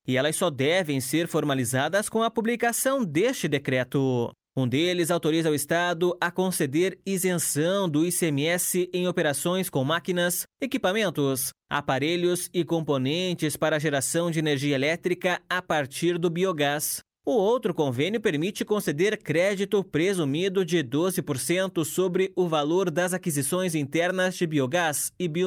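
Nothing in the signal points to a technical fault at any point in the recording.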